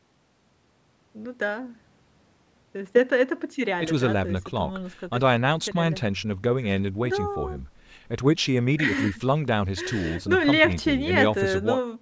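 No technical faults are audible.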